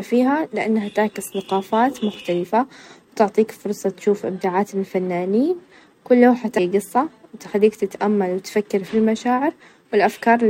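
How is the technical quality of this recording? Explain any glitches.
The recording has one glitch, a case of compressed frames skipped at 6.57 s. A run of 26.1 ms frames never got decoded, so the speech leaps ahead by about a fifth of a second. Overlapping frames blur the join into a short smeared blip. A waveform shows an abrupt shift in the envelope, and a spectrogram shows a visible discontinuity with slightly smudged edges rather than a sharp vertical click line.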